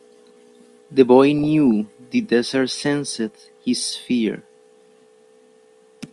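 Weak DAB reception let bit errors, around a few tenths of a percent, slip past error correction into this speech recording's MP2 audio. From 1.39 to 1.67 s, DAB burbling puts short blips of noise into single sub-bands across 19 frames over the speech.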